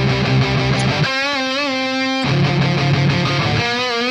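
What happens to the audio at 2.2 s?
A brief chirp-like blip of misplaced energy, peaking around -20 dBFS, cuts through the audio at 2.22 s. This is a corrupt frame decoded: flipped bits in a few compressed frames were played anyway, so misread gains and codes scattered energy into the wrong frequencies for that instant.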